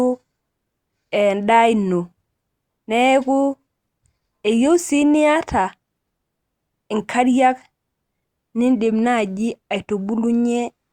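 Nothing in this short speech recording stood out as a technical problem on listening.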